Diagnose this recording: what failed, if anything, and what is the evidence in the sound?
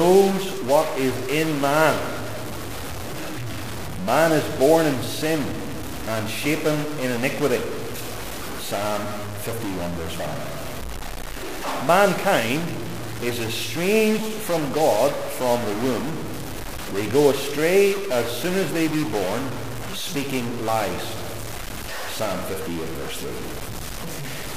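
A stuck bit runs throughout: harsh, buzzy distortion rides on everything, and even the pauses are filled with noise. The likely cause is one data line held fixed at the converter or its wiring, putting about half the samples off by a step of roughly -25 dBFS.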